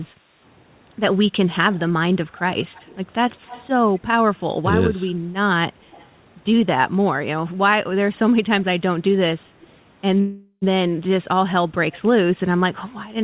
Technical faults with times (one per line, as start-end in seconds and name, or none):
0.13-0.25 background gated by the echo canceller
1.72-1.79 echo leak
2.36-2.40 echo leak
2.74-3.68 echo leak
3.95-4.00 echo leak
5.91-6.07 echo leak
10.20-10.64 call audio freeze